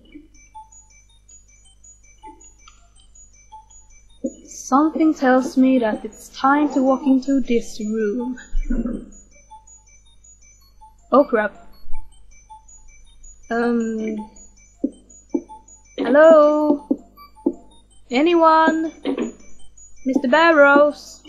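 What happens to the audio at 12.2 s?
At 12.2 s the audio is intact, with no fault heard at that moment.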